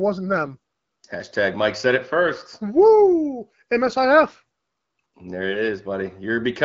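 At 5.50 to 5.60 s, AMR bit errors corrupt a short stretch of the HD Voice speech, which otherwise carries only light codec colouring. The span fits about four frames hit at a few percent bit errors. Weakly protected bits flip, misplacing excitation pulses and skewing fine pitch, gain and spectral values, so the speech turns briefly hoarse and gargly. Unlike packet loss, it keeps its level and rough pitch, with no gap or repeated chunk.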